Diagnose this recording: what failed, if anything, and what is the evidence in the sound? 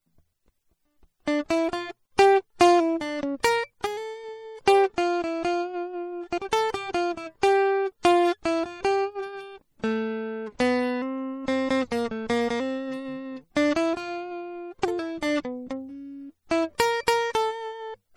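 The damage is at the codec stage, and it sounds like MP3 compression, likely at a low bitrate, something around 48 kbps. It's plainly audible the whole way through the music: the upper detail has that watery, swirly quality where weak frequency components flicker in and out from frame to frame. That happens when the encoder runs out of bits and starts discarding whatever its hearing model treats as expendable.

There's also pre-echo on three sharp attacks, at about 3.43 s, 8.03 s and 16.78 s. Each hit has a short hiss just ahead of it, spreading back 12 to 19 ms, and the attack itself sounds soft. The encoder spread its quantisation noise across the whole transform block. Because the transient landed late in the block, noise sized for the loud hit also filled the quiet moment just before it.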